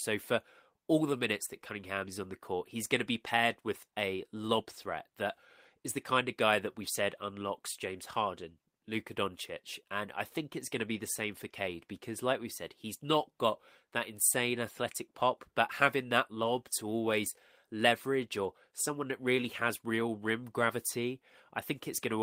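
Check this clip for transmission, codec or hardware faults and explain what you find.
Nothing stood out on listening to this recording of speech; no transmission, codec or hardware problem could be heard.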